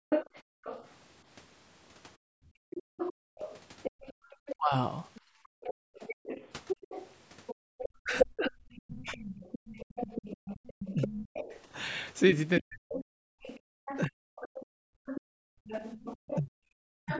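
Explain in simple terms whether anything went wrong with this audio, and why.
Several things went wrong, all tied to the call's echo canceller.

Background gated by the echo canceller: between 0.0 and 7.74 s, and again between 13.31 and 15.06 s, the room sound briefly drops almost to silence while the loudspeaker plays.

Other side's voice leaking through: from 0.09 s to the end, a quieter second voice sits under the speech, likely because the echo canceller left some loudspeaker sound in the microphone.

Speech suppressed in double talk: the talker's voice dips or cuts out in pieces between 2.32 and 4.74 s, and for about three seconds in total between 8.02 s and the end. This likely happens because both sides spoke at once.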